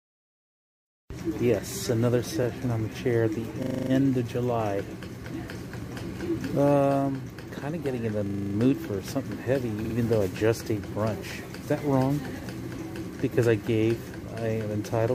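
Twice, a run of compressed frames was written or delivered more than once, producing repeated frames. At 2.42 to 2.45 s a 26.1 ms stretch, which fits a single compressed frame, plays one extra time. At 9.84 to 9.94 s a 52.2 ms block plays two extra times. Each repeat is a brief stutter, and together they lengthen the audio by 26.1 ms and 104.5 ms.

Separately, a system hang loop occurs at 3.63 to 3.91 s and again at 8.27 to 8.55 s. Each time, the computer stalls while the sound hardware keeps cycling one 40 ms stretch of its ring buffer. That stretch repeats 7 times at 25 Hz, producing a rapid, machine-gun-like stutter before playback resumes with essentially nothing skipped.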